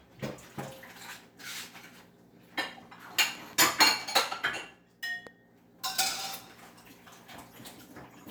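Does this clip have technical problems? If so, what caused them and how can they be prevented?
Yes. There are two loud pops. At 3.35 to 3.55 s, two sharp pops land in quick succession on top of the sound, and a single pop follows at 5.27 s. Each peaks roughly 5 dB above the surrounding material while the sound carries on underneath. The likely cause is a sudden voltage step or pulse entering the signal path, from a connector being handled, a switch, static discharge or a driver glitch, which the following circuitry shapes into a brief thump. Seat cables firmly, avoid switching or touching connectors while recording, and control static near the equipment.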